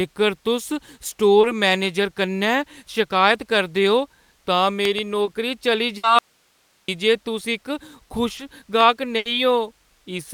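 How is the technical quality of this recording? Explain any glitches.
The recording has repeated network and signal-path faults, all in this short speech clip.

Short concealed packet loss occurs three times: 1.41 to 1.45 s, 5.25 to 5.29 s and 8.37 to 8.41 s. In each case about 20 ms of audio failed to arrive in time. The decoder extended the preceding sound, following its pitch where voiced and using shaped noise otherwise, then crossfaded back into the real signal. Each one is a brief smear or wobble, and a short consonant can drop out.

Loud pops occur at 4.85 to 5.01 s, where two pops land in quick succession, and again at 8.81 s as a single pop. The pair peaks roughly 15 dB above the speech and the single one roughly 10 dB above. A voltage step or pulse, likely from a connector, switch, static discharge or driver glitch, is superimposed on the signal. The speech continues underneath the sharp crack.

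Bursts of packet loss occur at 5.97 to 6.05 s, with about 60 ms concealed, and at 9.17 to 9.27 s, with about 80 ms concealed. Several consecutive packets were lost or arrived too late to play. The receiver kept extending the last sound while attenuating it, so each gap becomes a held buzz or a fading hiss. Playback then resumes further along, and the speech in between is gone.

Audio dropout to a faint residue runs from 6.19 to 6.88 s, about 0.7 s. The speech cuts off abruptly and leaves only hiss at about 40 dB below normal level. The signal was likely interrupted upstream while the downstream path stayed live, so the noise floor remains audible. The abrupt start and end distinguish it from a natural pause or a fade.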